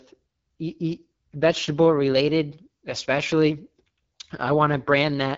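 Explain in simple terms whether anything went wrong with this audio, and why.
Something did go wrong, and it lasts the whole clip. The speech has passed through the AMR wideband (HD Voice) codec, the phone-call system behind HD Voice calls. It squeezes speech into very little data by copying the shape of the voice rather than the sound itself. Here it was set near its lowest quality, so the damage is plain: the voice sounds rough and raspy. Nothing above about 7.7 kHz survives, so the sound lacks airy crispness.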